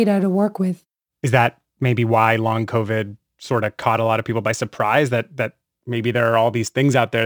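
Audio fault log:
throughout, sample clock jitter: the converter's timing wanders by a few microseconds, so fast-changing parts of the speech are sampled at the wrong instant, leaving a grainy hiss roughly 30 dB below the signal that swells on loud, bright sounds and disappears in pauses, unlike steady background noise.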